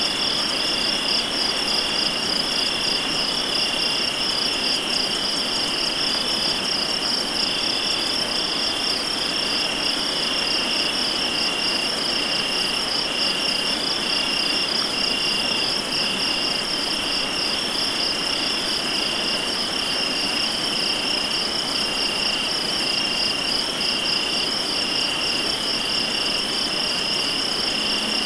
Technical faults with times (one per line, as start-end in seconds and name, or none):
none